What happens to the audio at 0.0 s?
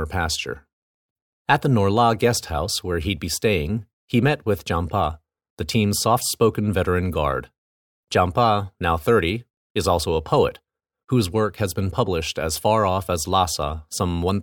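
At 0.0 s the audio is intact, with no dropout, click or distortion at that point.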